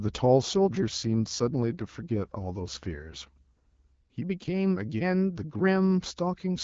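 From 0.67 to 3.42 s there's an AMR rate drop: the speech gets rougher and more synthetic, which fits the codec stepping down from 12.65 to 8.85 kbit/s, likely over a weak radio link. The band stays the same with no gaps, and the clearer HD Voice sound returns afterwards.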